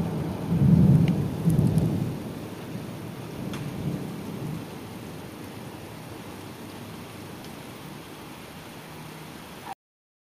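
At 9.73 s the sound just stops mid-flow, a cut-off end: the final stretch of buffers never got written out, so instead of decaying naturally it drops straight to digital silence and stays dead for the last half second or so.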